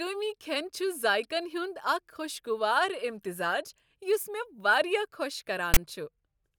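At 5.74 to 5.77 s the speech is cut by about 27 ms of file tags played as audio. A block of text metadata was decoded as if it were sample data, so character codes became a loud, harsh rasp pushed to one side of the waveform. Unlike a click or dropout, it is a dense burst of static with abrupt square edges. Unlike full-scale white noise from compressed data, its grainy buzz sits off-centre.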